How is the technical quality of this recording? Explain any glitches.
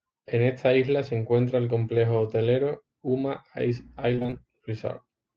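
One glitch stands out, late in the clip. From 4.15 to 4.34 s there is repeated packet loss, with a robotic sound. Several short holes, none over 20 ms, arrive in quick succession. Each is patched by stretching the preceding sound, so nearly half that stretch is filled-in audio. The speech turns choppy. Unlike a single dropout, the losses recur rapidly, giving a choppy, stuttering texture rather than one clean gap.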